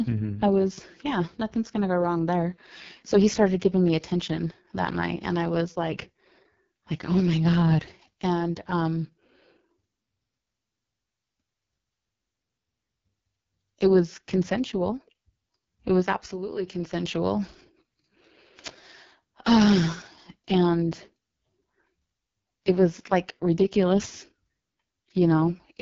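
Speech runs through AMR wideband (HD Voice) coding from start to finish, and it's pretty badly mangled. The voice has that rough, raspy, buzzy edge you get when the codec's pulse-driven vocal tract model is starved of bits, which fits the lowest 6.6 kbit/s mode. Nothing survives above about 7.4 kHz, and the top band up there is really just shaped noise standing in for real detail.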